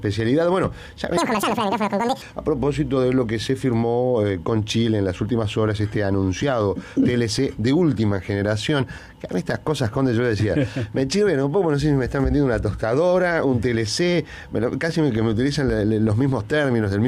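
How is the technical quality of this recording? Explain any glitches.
The recording has one glitch. From 1.17 s to 2.22 s the audio was read two samples at a time (double speed): the reader treated each pair of samples as a single frame, as if the data had two channels or samples twice as wide. Playback runs at 2.0 times normal speed and pitch jumps up an octave, giving a chipmunk-like burst before normal playback resumes.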